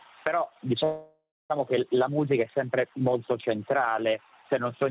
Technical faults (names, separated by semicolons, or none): call audio freeze